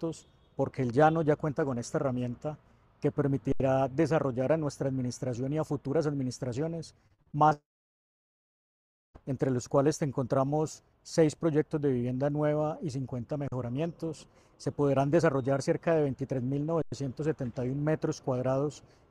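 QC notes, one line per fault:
3.52 s, 13.48 s, 16.82 s: underrun with held sample. Sound freezes flat for 80, 40 and about 100 ms, then resumes softly where it stopped, with nothing skipped.
7.07 to 7.53 s: repeated packet loss (robotic sound). Six short holes, the longest 41 ms, are patched by continuing the last sound, leaving choppy fragments.
7.53 to 9.16 s: long network dropout, likely. The patched sound fades into about 1.5 s of silence, and the audio returns with roughly 1.6 s missing.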